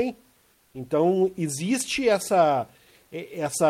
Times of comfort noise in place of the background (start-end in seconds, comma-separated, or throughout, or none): 0.51-0.73